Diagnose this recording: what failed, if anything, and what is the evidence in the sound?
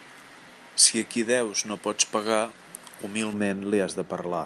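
Pre-emphasis left on, 0 to 3.33 s: the speech goes thin and sibilant, with treble up about 11 dB at 10 kHz. The recording or transmission stage applied a J.17-style boost and never undid it.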